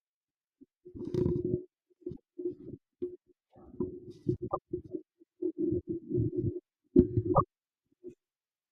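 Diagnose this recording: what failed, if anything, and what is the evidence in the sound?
The failure is in the codec stage: damaged data in a compressed stream. Three brief disruptions break the speech at 2.10 to 2.20 s, 4.45 to 4.57 s and 7.31 to 7.41 s, each roughly 0.1 s long. Corrupted bytes make the decoder misread those frames and lose sync until it finds a valid header. On a spectrogram each appears as a short smear of broadband or tonal junk cutting across the speech harmonics. The waveform shows an abrupt, discontinuous segment.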